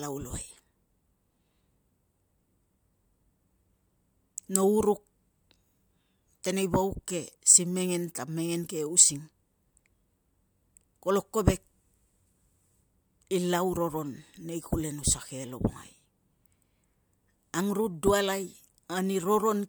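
No technical faults can be heard anywhere in the speech, so there is nothing to place in time order.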